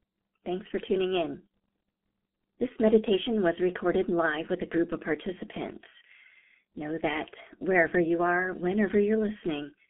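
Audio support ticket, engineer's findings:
Muffled, hoarse speech end to end, nothing above 3.8 kHz, telephone-narrow band. Consonants smeared, heavy codec grit. Points to the G.723.1 codec. Its 30 ms frames update the voice model slowly, which blurs transitions, consistent with roughly 6 kbit/s.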